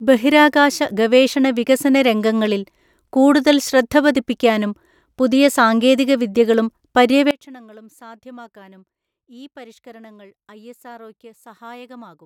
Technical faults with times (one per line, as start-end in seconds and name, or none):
7.31-12.26 one channel inverted